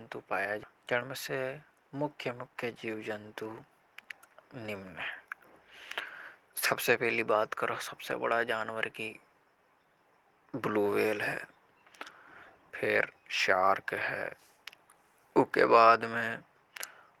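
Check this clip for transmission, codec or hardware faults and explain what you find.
Two transmission faults appear early in this speech clip. At 0.63 s, a skip ahead: the speech jumps abruptly forward with no gap, losing about a second. That audio was dropped in transit or by the jitter buffer while later audio waited. From 0.73 to 2.49 s, a jitter buffer speed-up: speech runs about 7% fast at unchanged pitch and sounds hurried, as the buffer trims short pitch-period pieces, roughly 150 ms in total, to cut excess delay.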